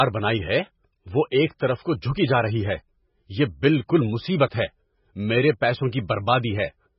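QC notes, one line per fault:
Throughout, MP3 compression artefacts. The speech has nothing above 5.5 kHz, so it sounds dull and boxed in. The damage is heavy: a watery, swirling texture runs under every phrase, and s sounds break into metallic chirps. The likely cause is an MP3 encoder starved of bits, which fits a very low bitrate near 16 kbps. Short of data, it cuts the treble at a fixed point and drops weak frequency lines, which flicker on and off between frames.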